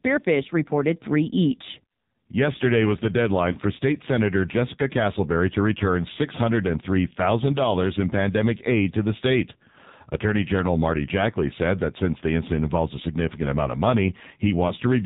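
From the start to the end, the speech passes through the AMR narrowband mobile codec at heavy damage. Sampling at 8 kHz leaves nothing above 4 kHz, so the sound is muffled and band-limited. Because the codec rebuilds the signal from a vocal tract model driven by a handful of pulses, the result is buzzy and synthetic. That degree of coarseness fits a low mode around 5.9 kbps.

At 3.52 to 3.58 s, and again at 14.68 to 14.74 s, there are lost AMR speech frames. Each gap is about 20 ms, consistent with a single frame failing its checksum. The decoder fills the hole by repeating the last good pitch and vocal tract settings at reduced gain, which is heard as a short dip or warble in level before the signal resumes, briefly weaker or rougher.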